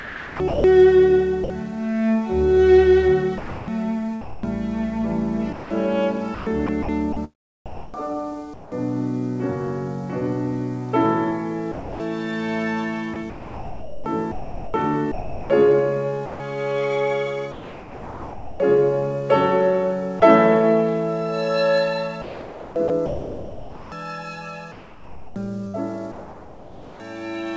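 From 0 to 1.5 s, 3.38 to 8.72 s, 11.72 to 18.6 s and 22.22 to 27.0 s, the sound is chopped by the voice detector. It breaks up repeatedly, with about 0.6 s, 1.4 s, 3.1 s and 3 s swapped for comfort noise, likely from the sender's detector toggling transmission. At 20.2 s a single 20 ms piece of sound is dropped by the voice detector and filled with comfort noise, likely after the detector mistook it for background. That one clean gap sets it apart from the repeated flicker of chopping. Throughout, the G.722 call path carries nothing above 8 kHz.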